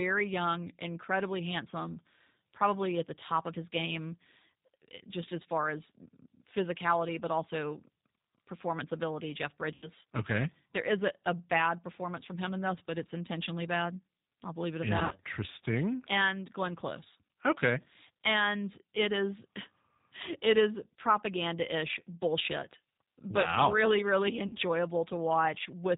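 Throughout, the G.729 codec band-limits the speech below 4 kHz and plainly roughens it, which fits 8 kbit/s G.729A. VoIP packet loss concealed by the speech codec occurs at 9.74–9.89 s, at 14.99–15.18 s after "I'll believe it at", and at 24.47–24.56 s after "but wow really really". The decoder extrapolates its last pitch and filter, fading the sound into a buzzy tone or coloured noise.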